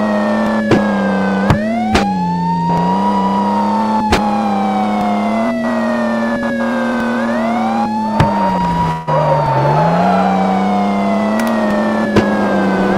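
At 8.91 s the sound suddenly smears into a buzzy, hiss-like tail that carries on from whatever was playing and fades away. There is no clean gap of silence before normal audio resumes at 9.09 s, though it comes back slightly further along, with a short piece simply missing. This is most likely a long network dropout. The packets stopped arriving, so the receiver improvised about 156 ms of fill while roughly 160 ms of real audio never played.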